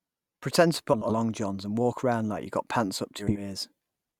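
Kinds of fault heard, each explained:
Frames out of order: two neighbouring 80 ms blocks decode swapped, so speech near 0.93 s and 3.19 s flutters garbled.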